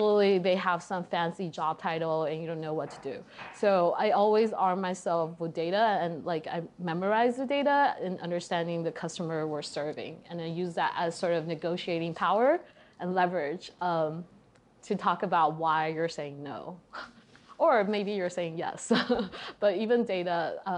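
Nothing in the clip stands out as a technical fault at any point, so there's nothing here to track down.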